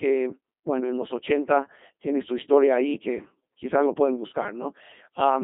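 A Codec 2 vocoder runs throughout: at roughly 2.4 kbit/s only pitch, voicing and envelope survive, resynthesised as sine waves, so speech turns buzzy and robotic, with nothing above 3.6 kHz.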